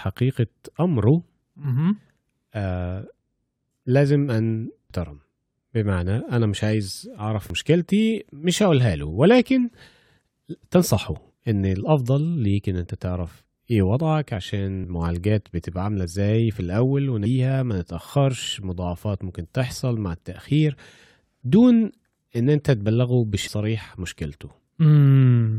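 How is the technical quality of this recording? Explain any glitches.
The speech carries two brief glitches from damaged data in a compressed stream, at 4.90 s and 7.50 s. At each point a corrupted stretch of the encoded data makes the decoder misread or discard frames and hunt for the next valid frame header, so a short chirp, squawk, click or hole breaks into the speech. On a spectrogram each one shows as a thin vertical smear of garbled energy or a narrow gap. On the waveform it appears as an abrupt, out-of-place blip or dropout.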